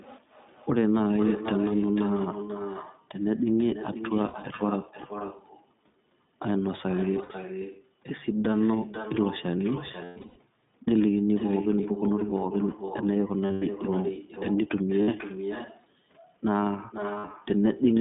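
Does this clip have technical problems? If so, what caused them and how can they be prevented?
Yes, three things stand out. First, echo with no canceller: the whole clip carries a fainter, thinner copy of the speech arriving about half a second behind it, around 11 dB down. That's the far end playing the call on a loudspeaker, its mic picking it back up, and nothing subtracting it before it returns over the network. Prevention: enable acoustic echo cancellation at the far end, or have that person use a headset.

Second, the iLBC codec itself: the line is narrowband, roughly 150 Hz to 3.7 kHz, so there's nothing up top, and the speech has that slightly rough, synthetic edge you get when each 20 ms frame's excitation is coded on its own. The damage is plainly audible, and the sound fits iLBC's 15.2 kbps mode. Prevention: negotiate a wideband codec such as Opus or G.722 when both ends support it.

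Third, lost iLBC frames: packets went missing and the decoder filled the holes by repeating the last pitch cycle with noise mixed in, so you hear brief held, buzzy vowels. They're at 0.98–1.01 s (20 ms), 4.26–4.36 s (80 ms), 7.24–7.32 s (60 ms), 10.04–10.39 s (260 ms scattered, longest run about 100 ms), 13.46–13.63 s (140 ms), 15.02–15.09 s (60 ms) and 17.18–17.36 s (100 ms). Each recovers almost immediately because frames stand alone. Prevention: fix the network loss, or add FEC and a jitter buffer.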